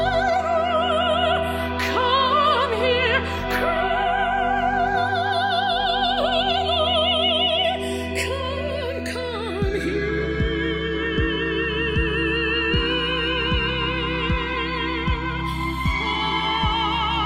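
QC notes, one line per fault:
Throughout, channels drifting apart: in mono the sound takes on a slow flanging as comb notches sweep gradually through the spectrum. The channels run on separate clocks, around 70 ppm apart, so the delay between them creeps to roughly a millisecond by the end.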